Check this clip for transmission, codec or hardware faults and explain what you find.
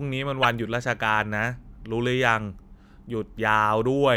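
One codec fault stands out. From 0.43 to 0.45 s, a short, loud chirp-like burst of noise cuts across the speech, peaking around -5 dBFS. It is a corrupt frame decoded: bits in a few consecutive compressed frames were damaged, and the decoder played them anyway. The misread gains and spectral codes put strong energy at the wrong frequencies for roughly 25 ms, producing the squeak instead of the intended speech.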